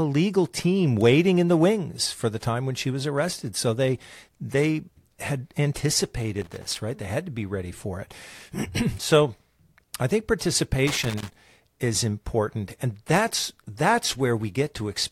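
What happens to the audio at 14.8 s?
Nothing goes wrong at 14.8 s: the speech continues intact there, with no dropout, click, distortion or other fault.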